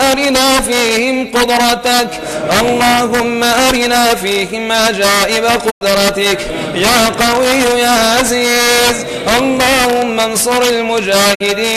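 A digital broadcast dropout occurs at 5.69 s to 5.83 s and again at 11.33 s to 11.42 s. Each time, the receiver lost valid frames and muted instead of playing corrupted data, fading out over about 20 ms. The first hole removes 96 ms of audio and the second removes 48 ms, which fits a loss of four and two frames of roughly 24 ms each. The sound then resumes later in the programme, and whatever was broadcast during each gap is gone.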